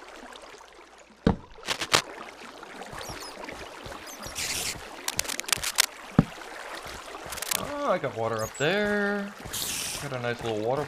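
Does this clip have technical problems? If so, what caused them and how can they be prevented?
Yes. Cable scratch noise appears three times: 1.65–2.01 s, 5.08–5.85 s and 7.30–7.64 s. Each is a dense, uneven scratching burst, somewhat louder than the sound itself in the first two and roughly level with it in the third. The likely cause is a worn cable, connector or control being moved, so its contact resistance fluctuates rapidly and injects noise. Replacing worn cables, cleaning connectors and securing cable runs prevents it.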